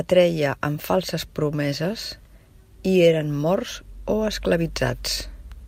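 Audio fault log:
No audible technical faults appear anywhere in the speech signal.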